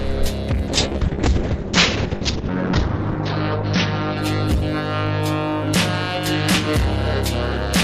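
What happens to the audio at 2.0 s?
At 2.0 s the audio is inside a call bitrate drop running from 0.68 to 6.73 s. The encoder's rate falls from 96 to 6 kbps, coding coarsely and cutting the top from 20 kHz to 6 kHz. The sound turns muffled, then clears by 6.73 s.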